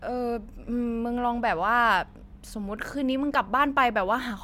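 Speech, with nothing technically wrong with it.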